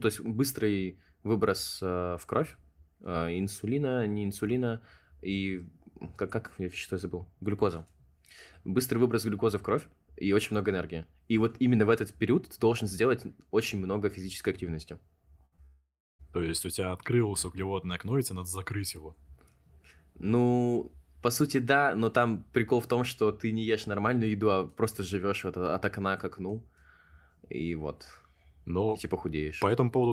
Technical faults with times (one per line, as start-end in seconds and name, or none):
15.45-15.54 burst of packet loss
15.56-15.59 short concealed packet loss
15.65-16.21 long network dropout